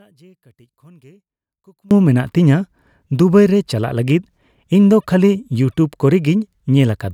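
One stereo channel is likely inverted in polarity for the first 1.91 s of this speech clip, so when the two channels are summed to mono the shared centre content cancels, dropping the level by about 32 dB and leaving only a faint residue until the voice returns at full level.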